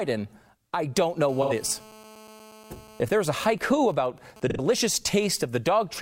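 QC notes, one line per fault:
1.29–3.02 s, GSM phone buzz: a 2G phone in an active call is transmitting bursts about 217 times a second, and the audio circuitry rectifies each radio pulse. This adds a steady, hard, raspy 217 Hz buzz rich in harmonics, about 24 dB below the speech.
1.42–1.53 s and 4.50–4.60 s, AAC frame loss with concealment: each time, roughly 85 ms of coded audio went missing, consistent with two lost frames. The decoder rebuilt the gap from the preceding spectrum, leaving a brief smeared, noisy or phasey patch in the speech.
3.10–4.78 s, GSM signalling bursts: a 2G phone, in a call but with its user silent, sends only intermittent groups of bursts at the 217 Hz rate. Rectified by the audio path, these give even ticks with a longer buzz twice a second, roughly 25 dB down.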